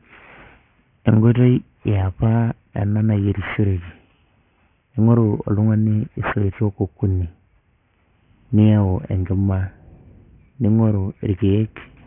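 Aliasing runs through the whole speech clip. The sound stops sharply at 3 kHz, which points to a sample rate cut to 6 kHz with no anti-alias filter first. Energy above that edge folds back down as unrelated tones sitting roughly 20 dB under the speech, so sibilants turn gritty and metallic. A plain low-pass filter would sound dull but clean. Here the added harsh, wrong-pitched hash is what marks it as aliasing.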